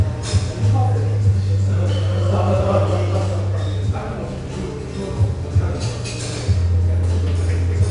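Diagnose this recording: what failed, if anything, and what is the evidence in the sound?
The codec stage failed: the audio went through 4-bit ADPCM compression for its whole length. Each sample becomes a coarse 4-bit step from a predicted value, so a gritty hiss rides on every loud passage, plainly audible. Nothing reaches above 10.6 kHz, which points to roughly 89 kbps at a low sample rate.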